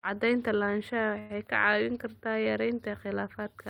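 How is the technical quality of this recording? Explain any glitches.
One glitch stands out: a call audio freeze from 1.19 to 1.32 s. The sound stalls into a short, fading buzz, likely because delayed packets let the jitter buffer run empty. About 104 ms is filled in, nothing is lost, and everything afterwards plays 104 ms late.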